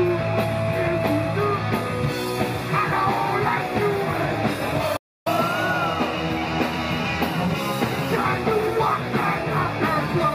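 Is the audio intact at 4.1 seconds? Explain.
Yes, at 4.1 seconds the audio plays straight through with no dropout, click, glitch or other fault.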